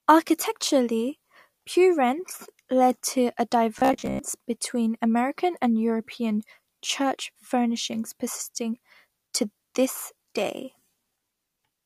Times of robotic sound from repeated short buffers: 3.79-4.19

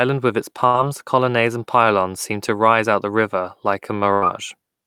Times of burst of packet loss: 0.67-0.76, 4.14-4.24

